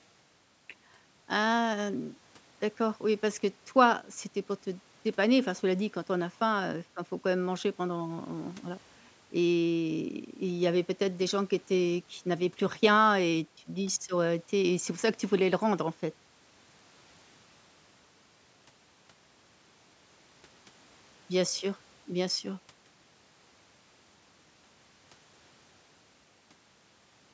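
No technical faults are audible.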